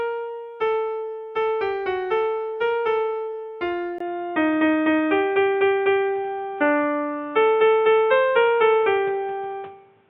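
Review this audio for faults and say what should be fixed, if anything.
At 3.98 s the sound drops out for about 20 ms, then comes back duller and boxier, with nothing above 3.8 kHz, a level shift of a few dB, and new background noise sitting well below the signal, somewhere around 35 dB down. That stays to the end. It's most likely an input switched to a poorer device mid-recording, like a fallback mic or a headset's call profile, which brings its own narrow band, tone and noise. To prevent it, lock the input device in the recording setup and turn off automatic device switching before you start.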